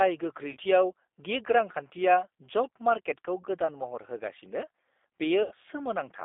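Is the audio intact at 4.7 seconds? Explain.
No. At 4.7 seconds the speech sounds rough, buzzy and slightly synthetic, thin and boxed in, with no bass below roughly 250 Hz and nothing above about 3.6 kHz. That damage runs through the whole clip, not just this moment. It is G.729 codec coding, consistent with an 8 kbit/s VoIP stream. Instead of the waveform, the codec transmits a vocal tract filter, a pitch predictor and a few pulses per frame, and the decoder rebuilds an approximation from them.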